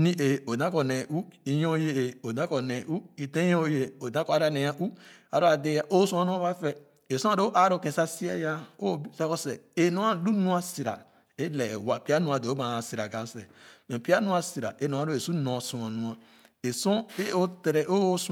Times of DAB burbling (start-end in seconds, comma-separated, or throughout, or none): none